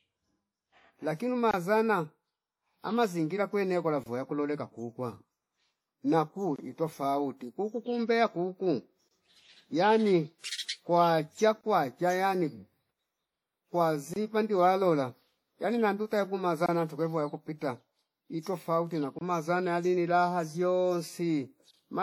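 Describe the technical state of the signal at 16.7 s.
A gap between chunks runs from 16.66 to 16.69 s: about 25 ms of hard-edged silence where one 2.5-second block of audio ends and the next begins. Nothing is lost, but the sound is cut by an abrupt hole at the join.

Under this, WMA compression is likely at work, as it is across the whole clip. Its long transform blocks smear quantisation noise over tens of milliseconds, giving plainly audible ringing, washy hiss that fits a bitrate around 48 kbps, and nothing above 19.6 kHz.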